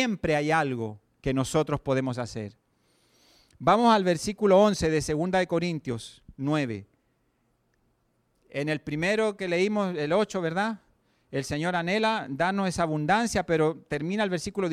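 No technical faults are audible anywhere in the speech recording.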